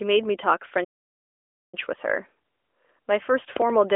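A playback stall runs from 0.84 to 1.74 s: the speech cuts to silence for about 0.89 s, most likely because the player starved of data or was blocked, then resumes.

A train of clicks runs from 3.57 s to the end: similar pulses at about 6.5 per second, irregularly spaced, peaking roughly 15 dB above the speech, likely from electrical interference or a struggling interface.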